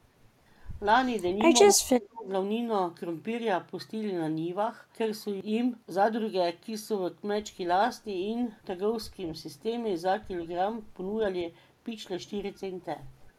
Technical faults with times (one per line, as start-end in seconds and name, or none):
1.63-2.26 speech suppressed in double talk